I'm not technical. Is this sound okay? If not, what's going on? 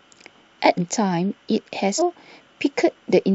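No. The speech jumps ahead twice, at about 0.77 to 0.79 seconds and 1.98 to 2.01 seconds. These are compressed frames skipped. Small blocks of the file, each 46.4 ms long, were lost or rejected. About a third of a second vanishes first, then about four tenths of a second.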